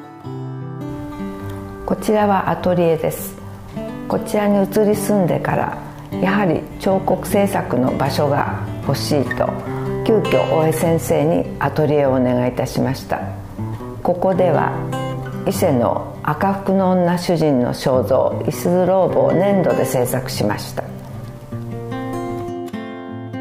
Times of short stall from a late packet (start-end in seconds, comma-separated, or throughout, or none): none